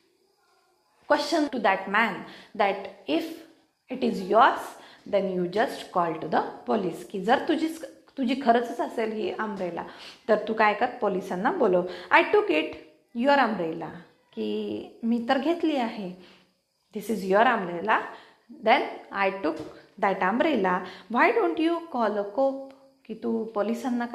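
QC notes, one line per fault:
1.47 s, skip ahead: the sound jumps forward abruptly with no gap and no fill, so roughly a second of material is simply absent and the two sides butt together almost seamlessly. A stretch of audio was discarded while later audio was already queued, whether lost in transit or dropped when the jitter buffer overflowed, so playback resumed about a second further on and the delay shrank by about that much.
1.54 to 1.98 s, 3.17 to 4.41 s, 5.06 to 5.45 s and 8.19 to 9.17 s, jitter buffer speed-up: these passages run faster with the pitch unchanged, at 112, 121, 111 and 104 percent speed, the first three sounding hurried. The buffer was holding more audio than its target, so the receiver repeatedly cut out short pitch-period-sized pieces to drain it, removing roughly 70, 300, 50 and 50 ms respectively.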